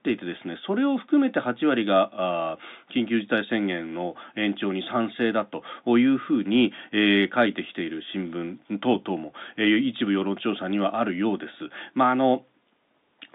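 No faults detected in the speech; the G.711 telephone coding is audible as a line band of roughly 200 Hz to 3.7 kHz.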